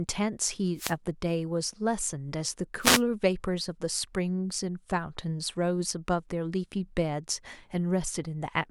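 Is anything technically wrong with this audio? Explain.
Yes. Two wireless microphone noise hits occur, from 0.75 to 0.95 s and from 2.80 to 3.02 s. The analogue FM signal fades as reflections cancel, so receiver noise swells over the speech as a brief static swish, unlike a digital dropout, which leaves silence or clicks instead of hiss.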